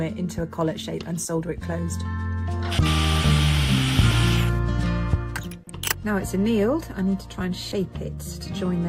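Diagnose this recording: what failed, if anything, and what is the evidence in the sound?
Codec stage: compressed frames skipped, heard as jumps at 4.11, 6.03 and 7.71 s, jumping ahead roughly 100, 100 and 70 ms, consistent with dropped 20 ms frames.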